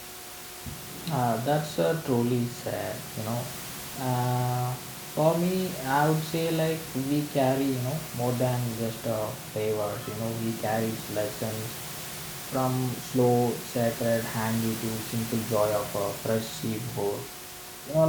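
No technical faults are present.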